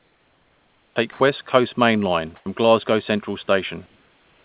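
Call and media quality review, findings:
Comfort noise in place of the background: 0.00–0.96 s (about 10 dB quieter), 1.12–1.20 s (about 7 dB louder), 3.86 s to end (about 2 dB quieter). Room noise, about 40 dB below loud speech, becomes a smooth, featureless band on the spectrogram, with level steps at the edges. Likely discontinuous transmission with receiver-generated noise.

Onset clipped by the voice detector: 0.91–0.96 s, about 50 ms missing. The word starts abruptly. The waveform jumps from flat comfort noise straight to speech with no ramp. Likely a slow detector decision at the sender, with noise filling the gap.

Sound dropped by the voice detector: 2.36–2.46 s, 100 ms replaced, about 40 ms of speech lost. Spectrogram harmonics cut off into uniform noise, then resume. Likely the detector misread speech as background. The band is empty above 4 kHz throughout, consistent with a G.711 mu-law call path.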